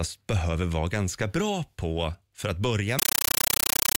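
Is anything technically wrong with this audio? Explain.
Yes. From 2.99 s to the end, the speech gives way to a compressed stream played as audio. An AC-3 bitstream, whose bursts suggest a 448 kbps Dolby Digital stream, reaches the output undecoded and is treated as ordinary samples. Each coded frame becomes a burst of about 9.3 ms of dense noise, then silent padding. This repeats 31.25 times a second. The result is very loud, chattering static that replaces the speech entirely.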